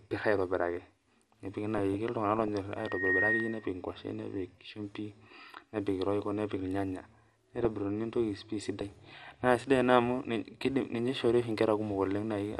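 The speech has been squeezed through a low-rate MPEG audio coder, most likely MP2 compression at a bitrate that the plainly audible damage suggests is around 80 kbps. With so few bits to share among its sub-bands, the coder switches off upper bands and quantises the rest coarsely, so the sound is dull throughout, with a granular, gurgling roughness under the speech and treble that flickers in and out. On top of that, three bursts of DAB burbling show where reception was weak and bit errors slipped past the error correction into the coded audio: from 1.77 to 2.48 s, from 7.10 to 7.66 s, and from 8.81 to 9.34 s, the last ending just before "naa sidai". Corrupted samples put noise into individual sub-bands, so each stretch is marked by short blips of noise. Between 2.77 and 3.71 s a loudspeaker feedback squeal breaks in, because the microphone was picking up the loudspeaker it fed and the loop gain rose above one at 1.9 kHz. 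That tone swells over roughly a third of a second into a squeal about 5 dB above the speech.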